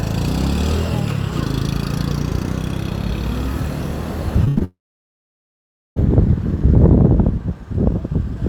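At 4.44 s, a short concealed packet loss: about 20 ms of audio failed to reach the decoder in time, so the receiver extended the preceding sound and blended it back into the real signal. It is heard as a brief smear or wobble. A second short loss follows at 4.58 s.

Between them, from 4.48 to 4.58 s, is a burst of packet loss. About 80 ms in a row never arrived, and the receiver stretched the last sound while fading it. The result is a short held buzz or hiss, after which the audio jumps ahead with that stretch missing.

From 4.64 to 5.98 s, the likely cause is a long network dropout, with about 1.3 s never delivered. The concealed sound fades quickly, leaving roughly 1.2 s of silence before the audio resumes further on, without the lost portion.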